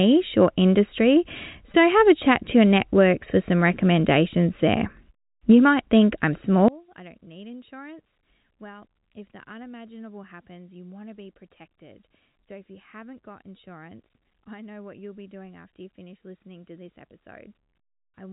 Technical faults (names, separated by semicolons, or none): packet loss with pitch repetition; one channel inverted